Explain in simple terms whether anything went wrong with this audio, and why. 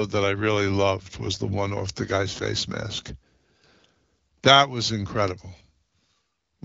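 Nothing went wrong with this speech recording. It has passed through the AMR wideband (HD Voice) codec used for phone calls, which carries the speech at a setting high enough to keep it clear.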